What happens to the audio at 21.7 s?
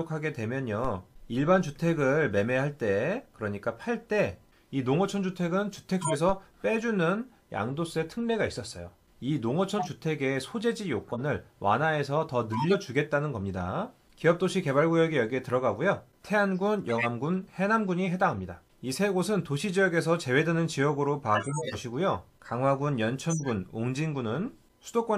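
A corrupt frame decoded runs from 21.35 to 21.75 s. Flipped bits in a short run of compressed frames, roughly seven judging by the length, were played anyway, so misread gains put energy at wrong frequencies. It sounds like a burst of chirpy noise peaking near -15 dBFS.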